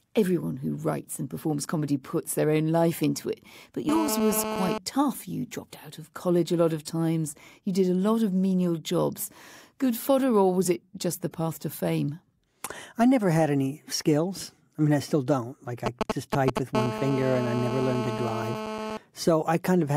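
From 3.89 to 4.78 s there is GSM phone buzz. A nearby 2G phone in a call transmits bursts 217 times a second. The audio circuit rectifies them into a hard, raspy 217 Hz buzz full of harmonics. It sits steady, about 5 dB below the speech.

From 15.86 to 16.59 s come GSM signalling bursts. The phone sends only brief groups of pulses here. They are heard as a galloping dit-dit-dit of short 217 Hz buzzes, louder than the speech.

The steady GSM phone buzz returns from 16.75 to 18.97 s. It is again a rasp at 217 Hz, about 6 dB below the speech.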